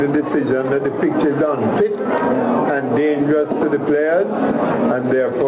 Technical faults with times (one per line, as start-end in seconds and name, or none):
0.00-5.47 gain pumping